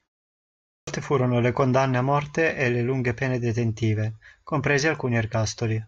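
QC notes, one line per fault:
0.65–0.87 s, clipped start after a pause: the output wakes late after 0.65 s of silence, losing 224 ms, so "furono le condanne a" starts abruptly.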